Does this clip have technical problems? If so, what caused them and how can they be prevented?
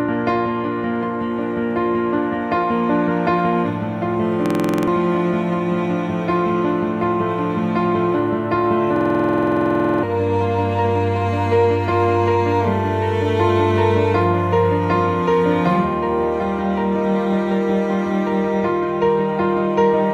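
Yes, there's a system hang loop, twice: from 4.46 to 4.88 s, and from 8.96 to 10.03 s. Each time the machine stalls while the sound hardware keeps replaying the same 46.44 ms chunk, about 21.5 times a second, which fits a 2048-sample ring buffer. The result is a rapid machine-gun stutter, and roughly 0.4 s and then about a second of real audio are lost. To prevent it, keep the audio thread at real-time priority and fix whatever is freezing the system or driver.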